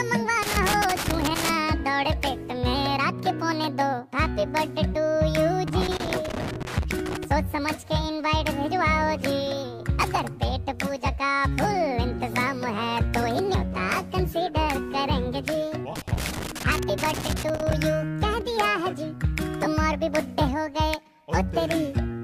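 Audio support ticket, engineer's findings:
Loose connector crackle at 0.43–1.54 s, 5.68–7.25 s and 15.96–17.73 s. Worn or dirty contact in a cable or jack intermittently making and breaking under movement. Signal chopped. Heard as irregular bursts of scratchy crackle over the audio.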